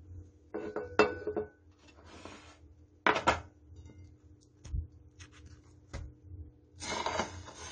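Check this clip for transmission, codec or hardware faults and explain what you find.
One codec fault runs through the whole clip: the sound has nothing above 9 kHz and is plainly damaged throughout, most likely by AAC compression, with a texture that points to AAC-LC at a low rate, around 32 kbps. Short of bits, the encoder quantises its frequency lines coarsely and drops the top band, leaving dullness with a smeared, warbling fizz on sustained parts. A plain low-pass filter would cut just as cleanly but leave no swirling artefacts below the cut-off.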